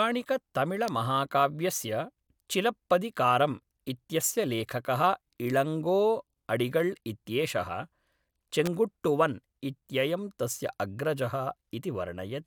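A nearby switch or static discharge likely arced into the line, an electrical switching spike, adding sharp snaps over the speech at 0.88 s and 8.66 s.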